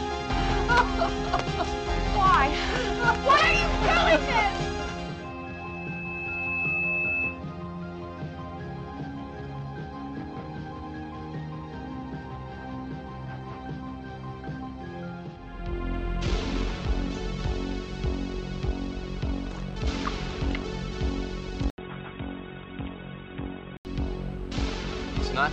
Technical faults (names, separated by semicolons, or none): input switched to a poorer device